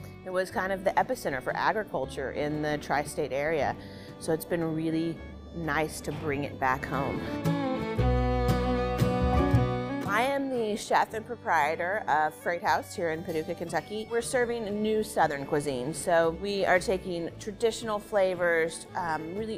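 No dropouts, distortion, glitches or other transmission or recording faults can be heard anywhere in the audio.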